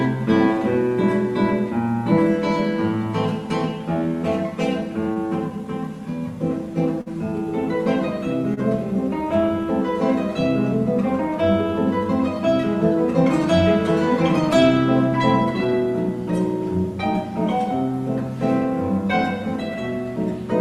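Three short stalls from a late packet turn up, at 5.13–5.18 s, 7.01–7.08 s and 8.54–8.59 s. Each time a packet is late, the jitter buffer runs dry, and the receiver holds the last bit of sound for about 27 ms, 50 ms and 29 ms before picking up exactly where it left off. Nothing is lost, so you hear a brief smeared hang with a slight buzz or dip, longest at the 7 s one, and playback sits that much later afterwards.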